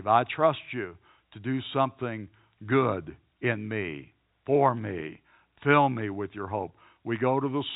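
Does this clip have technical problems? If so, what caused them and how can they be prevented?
No, there's nothing wrong here, just ordinary telephone-quality speech carried over G.711 mu-law at 64 kbps, with nothing above 4 kHz getting through, as the format intends.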